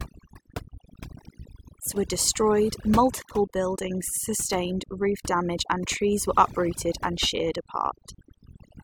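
From the start, the background drops and breaks up into twinkling specks. That is overdone noise removal: a reducer set too hard cuts whole frequency bands near its noise estimate, taking quieter speech detail with them.

Between 1.86 and 1.88 s a brief glitch cuts in. This comes from damaged data in a compressed stream: corrupted bytes made the decoder misread frames there and lose sync until it found the next frame header.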